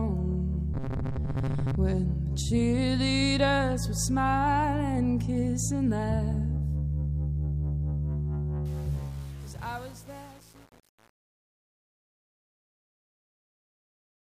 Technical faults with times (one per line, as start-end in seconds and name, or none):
0.74-1.76 robotic sound from repeated short buffers
8.66-14.28 truncation distortion on a fade